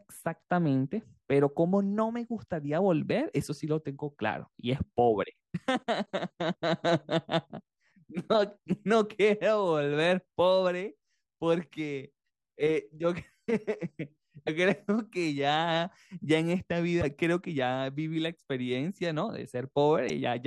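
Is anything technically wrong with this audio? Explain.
Yes. Three brief glitches, at 14.46–14.49 s, 17.01–17.03 s and 20.08–20.10 s, each about 26–28 ms, are likely a broken MP3 bit reservoir. After a cut, the next frame reads borrowed bytes from the wrong frame, so the speech skips ahead with a chirp, burst of noise or short hole. That skip distinguishes it from a simple dropout.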